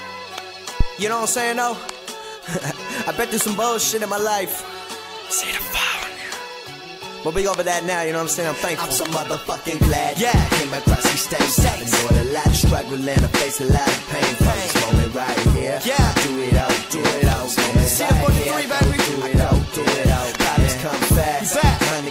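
A phantom power thump sits between 0.81 and 0.89 s, a deep, dull knock at the very start of the audio that peaks at about −3 dBFS and dies away within roughly 19 ms. It comes from a supply being switched on or off while the input was live: the sudden DC step charges the input's coupling capacitors and is passed through as a single low-frequency pulse.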